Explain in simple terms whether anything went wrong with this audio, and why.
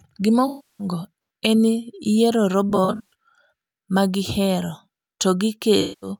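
The speech has AAC frame loss with concealment at 0.47–0.87 s, 2.69–3.13 s (brief gaps scattered, the longest around 40 ms) and 5.81–6.09 s. Unlike a plain dropout, which goes silent, the decoder guesses from earlier sound, leaving smeared, noisy patches.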